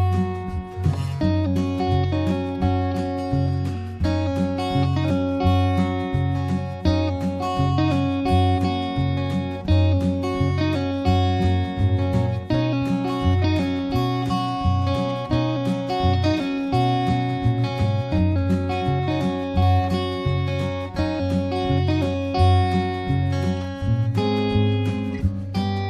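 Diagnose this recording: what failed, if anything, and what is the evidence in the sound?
Nothing in the signal points to a failure at any stage between capture and playback: the level stays continuous, with no gaps, discontinuities, distortion or timing irregularities that would mark a problem in the chain.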